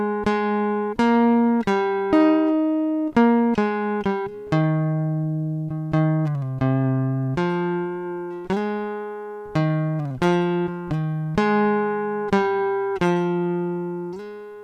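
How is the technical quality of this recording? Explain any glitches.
The recording has a timing fault that runs through the whole piece of music, caused by a clock mismatch and the corrections it forces.

Clock drift between sender and receiver: the sender's clock runs roughly 4 percent slow against the receiver's. The jitter buffer keeps draining, so playback cannot stay continuous on the incoming stream alone and small timing hiccups recur throughout.

Repeated timing corrections: from 0.09 s to the end at 14.64 s, the receiver repeatedly duplicates short fragments to fill the gap left by the slow sender, adding about half a second in total and playing at 96 percent speed. These uneven insertions come across as small hiccups.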